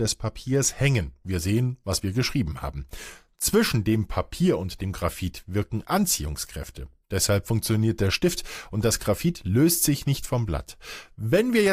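No technical faults can be heard anywhere in the speech recording, with the signal continuous and its level steady throughout.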